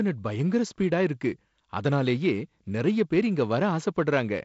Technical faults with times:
none

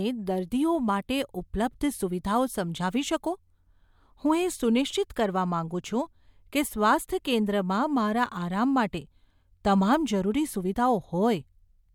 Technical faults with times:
none

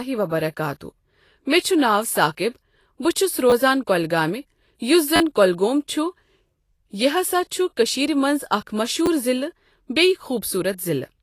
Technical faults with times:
0.00-11.23 Vorbis compression
3.50-3.52 repeated buffer
5.16-5.20 repeated buffer
9.06 repeated buffer

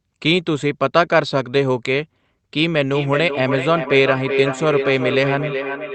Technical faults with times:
2.90-5.95 feedback echo between two devices

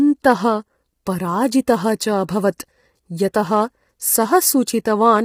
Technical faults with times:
0.00-5.24 low-delay AAC compression

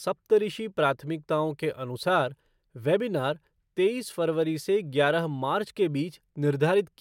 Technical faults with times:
none

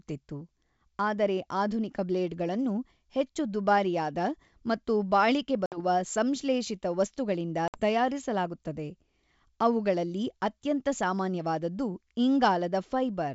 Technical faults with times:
5.66-5.78 packet loss on an ADPCM call
7.68-7.80 packet loss on an ADPCM call

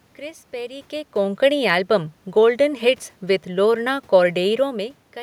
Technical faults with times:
none

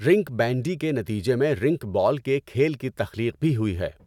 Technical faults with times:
none

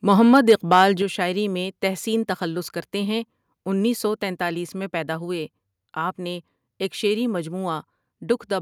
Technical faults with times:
0.33-0.82 microphone overload
1.02 microphone volume stepped down

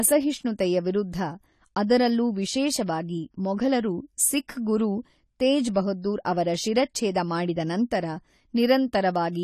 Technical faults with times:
0.00-9.44 AAC compression

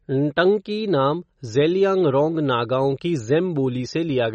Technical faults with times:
0.00-4.34 MP3 compression

